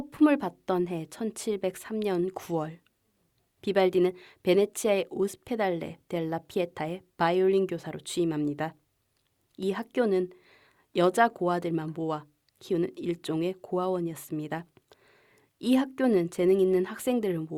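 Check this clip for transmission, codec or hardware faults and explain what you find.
No transmission, codec or hardware faults turn up in this clip.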